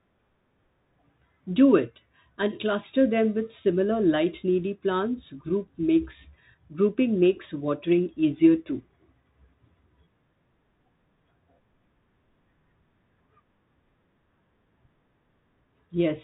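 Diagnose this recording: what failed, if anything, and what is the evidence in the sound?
Bluetooth CVSD headset codec damage runs through the whole speech clip, a codec-stage fault. Nothing passes above 3.8 kHz, s sounds turn scratchy, loud high sounds distort, and a granular hiss sits underneath: a one-bit, adaptive-step encoding consistent with 64 kbps CVSD.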